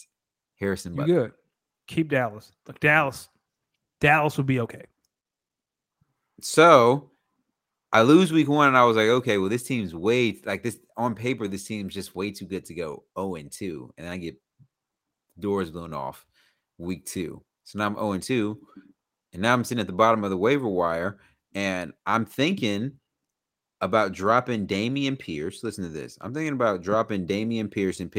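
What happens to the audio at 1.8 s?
At 1.8 s the speech falls within repeated timing corrections running from 1.51 s to 27.42 s. The receiver keeps repeating short pieces, playing at 98% speed and adding about half a second overall. Behind this is clock drift between sender and receiver: the sender's clock runs roughly 2% slow, so the jitter buffer keeps draining and must be padded.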